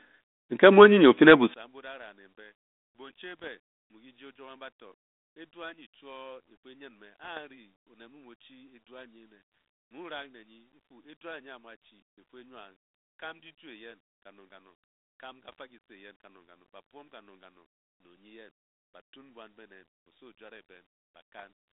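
Right after "nmu onye ofe le", at about 1.54 s, the speech drops by about 30 dB and stays faint to the end. That's most likely one channel inverted: the centred voice cancels when the two sides are summed to mono, leaving only their small differences.

On top of that, across the narrow 200 Hz to 3.7 kHz telephone band of the 32 kbit/s G.726 link, there are bit errors on an ADPCM link at 3.39–3.48, 7.24–7.39, 15.49–15.59 and 21.38–21.44 s. Each is a rough pop with a brief level wobble as the decoder's predictor and step size get knocked off course. The error rate is only a fraction of a percent.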